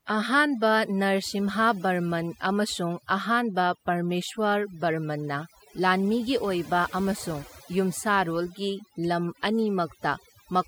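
From start to finish the speech carries overdone noise removal: a noise reducer set far too hard has pulled individual frequency bands down or out whenever they sat close to its noise estimate, taking quiet parts of the voice along. The gaps fall to near silence sprinkled with twinkling specks. Unlike a noise gate, which mutes everything at once, the damage here happens band by band.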